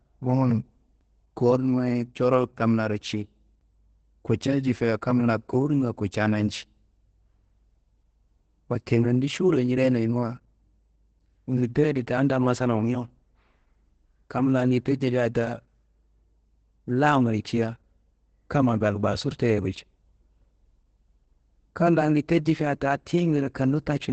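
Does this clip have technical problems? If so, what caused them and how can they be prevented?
Yes. Opus voice compression throughout: SILK coding leaves nothing above 8.8 kHz and a hoarse, slightly robotic edge, pointing to a low bitrate near 12 kbps. Prevent it by encoding at a higher bitrate.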